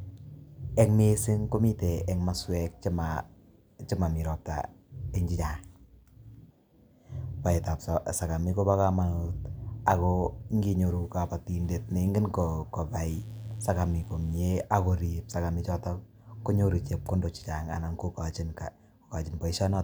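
Mains buzz appears from 13.10 to 14.60 s, a steady, raspy buzz sitting faint and well below the speech for that one and a half seconds. Sharp switching spikes from the 50 Hz supply, arriving twice per cycle through something like a dimmer, a rectifier or an unshielded lead, have leaked into the signal path. Because those spikes are so abrupt, their harmonics stack up from 50 Hz into the kilohertz range, which gives the buzz its edge.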